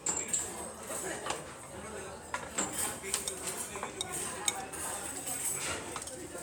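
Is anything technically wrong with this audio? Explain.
No, nothing technically wrong can be heard here.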